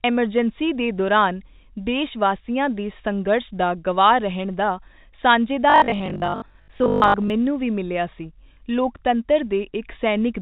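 From 5.70 to 7.30 s the speech turns into a rigid, metallic buzz pitched at 50 Hz, still loosely tracking the syllables, until normal delivery resumes just before "ਮੈਨੂੰ ਵੀ ਮਿਲਿਆ". This is robotic sound from repeated short buffers, likely caused by audio arriving too slowly, so the player loops its last chunk. A 50 Hz buzz fits a 20 ms buffer, and roughly half the audio in that stretch is repeats, with the real material skipped. The telephone-band G.711 coding is audible throughout as a narrow band with nothing above 4 kHz.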